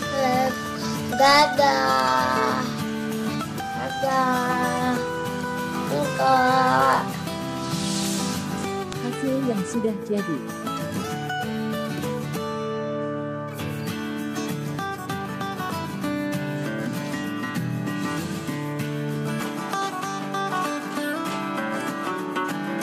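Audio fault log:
19.41–22.82 s, input switched to a poorer device: the recording likely moved to a different, lower-grade input at 19.41 s, with no gap at the switch. From there the band stops near 13 kHz, so the sound turns duller, the level shifts by roughly 5 dB, and a faint new background noise appears far beneath the signal.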